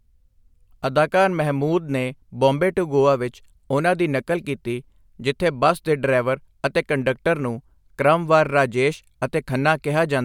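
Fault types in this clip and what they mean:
No technical faults are audible in this speech.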